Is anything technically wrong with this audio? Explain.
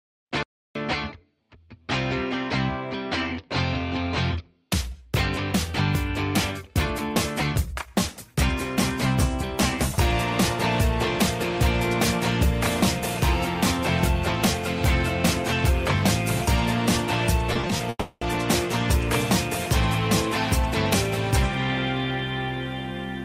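Yes. There are two network faults, close together near the end.

From 17.53 to 17.81 s there is repeated packet loss, heard as robotic sound. What sounds like four short holes, none longer than about 20 ms, break up the audio. Each hole is bridged by stretching the last bit of sound, about 80 ms in all. Concealment covers roughly 29% of the span. The result is choppy, with small pieces gone.

From 17.89 to 18.23 s the sound drops out for 320 ms. Most of that gap is filled by the last sound carried on and fading. The final 60 ms is plain silence. Audio then resumes without the lost part. This is likely a long network dropout, where nothing arrived for that stretch.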